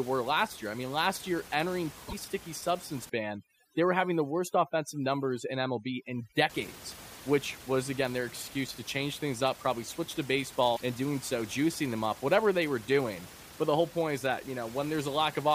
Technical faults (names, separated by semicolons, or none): damaged data in a compressed stream; overdone noise removal